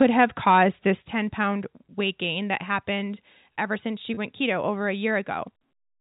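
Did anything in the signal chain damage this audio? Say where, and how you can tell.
Yes. Right from the start, 0 to 0.63 s, the loudest moments have flattened, crackly tops. That's microphone overload, likely at the converter input: the signal ran about 5 dB past the limit, with roughly 2 percent of samples clipped off.

Then there's the microphone volume being stepped down, in call processing. The level drops abruptly by about 2 dB at 0.02 s, about 7 dB at 1.02 s, and about 1 dB at 2.04 s, just before "gain that happened ever". Voice and background fall together, likely an automatic gain control cutting the input after those hot peaks.

Finally, at 4.14 to 4.17 s, between "happened ever since she" and "keto over a", there's a brief held, buzzy note. That's packet loss with pitch repetition on the network side: about 30 ms went missing, which fits a single lost packet, and the receiver looped the last pitch cycle to fill the gap.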